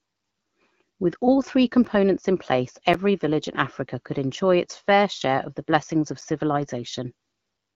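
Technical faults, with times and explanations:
1.85 s, 2.94 s and 6.21 s: blocks of digital silence. The audio drops to silence for about 2.7 ms after "all three", then 8 ms each after "in place" and after "of the blessings of". It jumps straight to silence and back with no fade, and the gaps sound like brief ticks. The shortest one fits a 128-sample buffer that was not filled in time.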